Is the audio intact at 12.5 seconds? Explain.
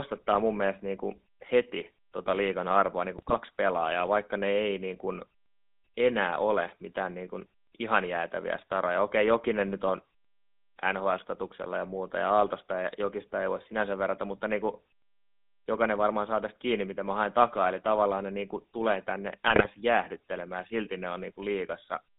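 No. At 12.5 seconds the speech carries GSM full-rate codec damage, present throughout the clip. The codec rebuilds the voice from a vocal-tract model driven by a sparse pulse excitation, which fits a 13 kbps bitrate, leaving a buzzy, gravelly roughness and a narrow line band of roughly 200 Hz to 3.7 kHz.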